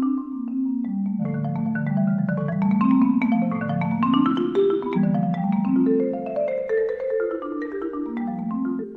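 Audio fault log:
1.16–1.22 s, 4.93–4.98 s and 8.78–8.85 s, damaged data in a compressed stream: at each point the compressed bytes arriving at the decoder are corrupt, so it cannot read those frames correctly, loses its place in the stream and has to search for the next valid frame header. While it misreads and resynchronises, the output breaks into a short chirp or squawk lasting about 50 to 65 ms.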